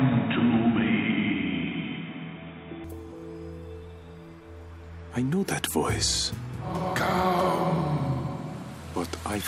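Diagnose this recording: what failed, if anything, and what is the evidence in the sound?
From the start to 2.84 s everything's dull and boxy, with nothing above 3.8 kHz and a faint extra noise floor about 40 dB down. Then it opens up with no gap or level jump. That's likely the input switched to a poorer device at the driver stage, then switched back.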